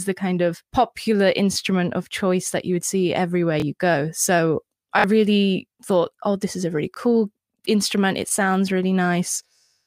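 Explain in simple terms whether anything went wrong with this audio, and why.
Repeated buffer at 1.53–1.56, 3.60–3.62, 4.99–5.04 (repeated twice), 6.94–6.97 and 8.29–8.31 s: fresh sound arrived late, so the player replayed its last 23 ms chunk, causing quick stutters.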